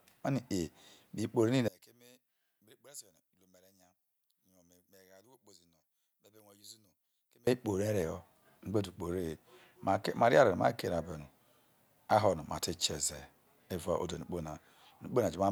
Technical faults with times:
1.68-7.47 one channel inverted

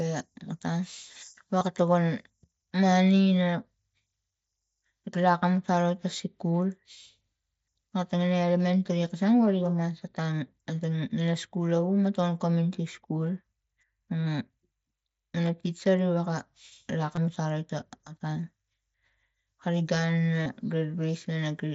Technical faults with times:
1.59-1.61 concealed Bluetooth headset packet loss
17.16 concealed Bluetooth headset packet loss
20.43-20.46 concealed Bluetooth headset packet loss

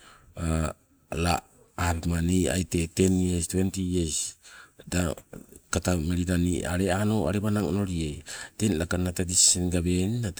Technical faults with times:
none

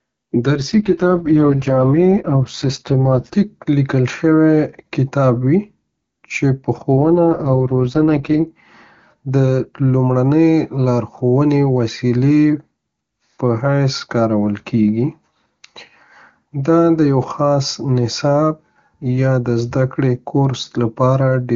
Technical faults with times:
0.58-3.36 AMR rate drop
6.92-8.48 AMR rate drop

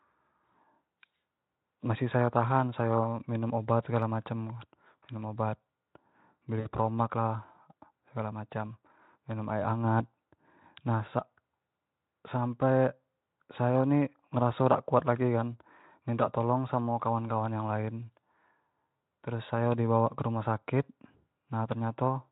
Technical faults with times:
6.59-6.67 VoIP packet loss concealed by the speech codec

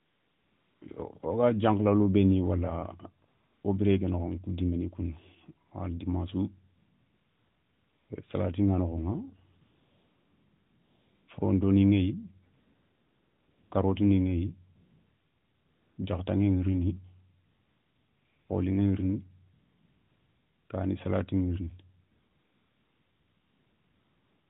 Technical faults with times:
0.00-0.82 AMR comfort noise
3.28-3.64 AMR comfort noise
5.68-5.72 AMR comfort noise
6.78-8.10 AMR comfort noise
9.62-11.28 AMR comfort noise
12.54-13.72 AMR comfort noise
14.76-15.98 AMR comfort noise
17.46-18.50 AMR comfort noise
19.54-20.70 AMR comfort noise
22.12-24.50 AMR comfort noise

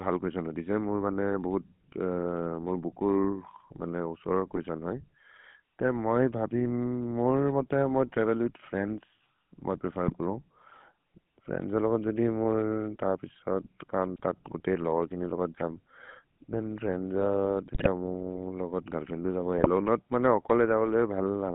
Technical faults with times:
0.00-21.54 GSM full-rate codec
4.50-4.60 GSM bit errors
10.06-10.14 GSM bit errors
14.16-14.26 GSM bit errors
17.74-17.87 GSM bit errors
19.58-19.68 GSM bit errors

